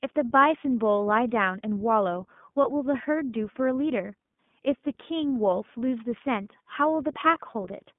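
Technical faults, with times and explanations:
Throughout: iLBC codec. The sound is confined to roughly 150 Hz to 3.5 kHz with nothing above the telephone band, and the speech carries a plainly audible rough, slightly synthetic grain, which fits iLBC's 15.2 kbps mode with 20 ms frames. Plain band-limiting of an otherwise clean line would sound dull but smooth. This grain comes from each frame's excitation being coded independently, so small mismatches at every frame boundary add a rough texture.
2.62 to 2.65 s: lost iLBC frames. The sound briefly turns into a held, faintly buzzy vowel-like tone for about 20 ms, which fits a single lost frame. The decoder fills the gap by repeating the last pitch cycle mixed with noise. A true dropout would instead leave silence or a click. Because iLBC frames stand alone, the speech is right again just after the gap, with no smeared recovery stretching into the following frames.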